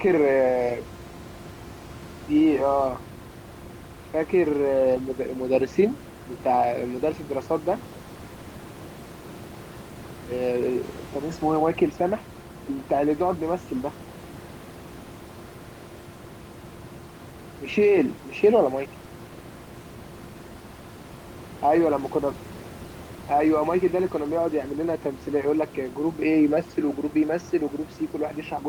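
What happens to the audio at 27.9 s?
At 27.9 s the speech is intact, with only the room's own background noise sitting about 16 dB below it.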